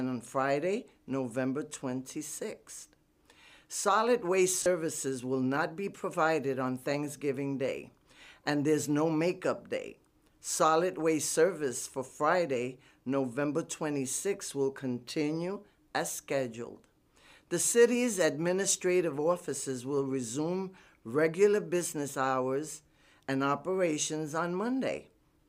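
Lost LE Audio frames occur at 4.63 to 4.66 s, a gap of about 30 ms that fits three 10 ms LC3 frames going missing over the Bluetooth LE link. With nothing to decode, the LC3 decoder filled the hole by replaying the last good spectrum with randomised signs. Any tonal content there loses its pitch and turns into a brief noisy smear before clean audio resumes.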